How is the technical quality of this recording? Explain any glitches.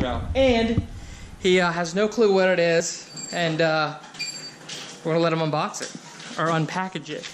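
Two brief glitches mar the recording: compressed frames skipped at 2.80 s and 4.18 s. Damaged or missing frames of roughly 26 ms each, which fits MP3-style framing, drop out, so the audio jumps ahead about 50 ms, then 30 ms.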